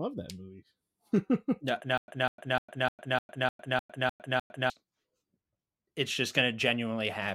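From 1.98 to 4.70 s, a stutter with silent gaps: a 199 ms fragment repeats nine times, each followed by 104 ms of digital silence rather than a seamless loop. The likely cause is a stalled stream.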